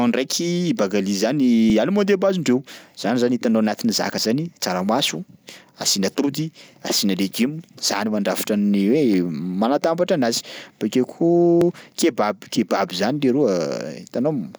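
The speech skips at 1.7 s, just after "ndraiky bagali zany", and again at 4.18 s, after "hitanao anatin'ny zaka". Further skips follow at 9.14 s, 11.61 s and 14.09 s. This is audio missing between chunks. Each time a brief sliver, around 20 ms, drops out and the two sides butt together with no gap. The regular spacing of roughly 2.5 s likely points to a recorder losing samples while switching from one chunk to the next.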